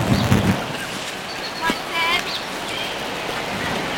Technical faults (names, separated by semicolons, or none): buffer tearing